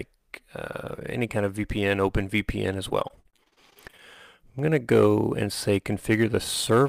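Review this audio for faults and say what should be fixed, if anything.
From 2.89 s to 4.0 s the sound turns choppy and robotic, with a rapid run of short holes, the longest about 39 ms. This is repeated packet loss (robotic sound): data kept arriving late or not at all, and each hole was patched by stretching the preceding sound. About 307 ms was filled in this way, roughly a quarter of the stretch, and the patching itself gives the robotic texture. To prevent it, stabilise the network path and use a larger jitter buffer with forward error correction.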